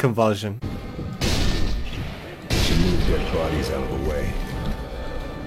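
At 1.62 s the receiver loses the digital signal and performs a digital radio blending to analogue, cross-fading over about 0.39 s to the FM broadcast of the same station. The level stays matched, with no audible jump, but a low FM hiss rises underneath, sitting roughly 40 dB below the programme. The analogue path holds until 5.06 s, when the receiver reacquires the digital stream and blends back, and the hiss drops away.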